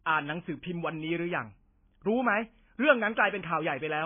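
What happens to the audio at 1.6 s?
At 1.6 s the speech sounds muffled, watery and swirly, as it does for the whole clip. This is likely heavy MP3 compression at a very low bitrate, around 16 kbps, which cuts everything above 3.5 kHz and drops weak frequency lines frame to frame. A spectrogram shows a flat ceiling at 3.5 kHz with patchy, flickering gaps below it.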